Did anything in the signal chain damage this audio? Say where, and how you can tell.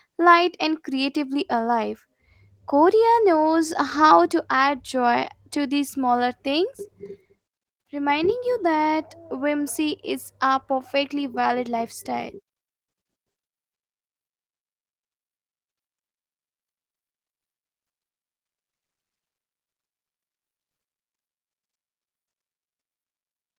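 No, nothing in the chain has damaged this speech: it passes through Opus voice compression with the full band kept, in what sounds like hybrid coding at a rate around 24 kbps, and that coding leaves only light traces.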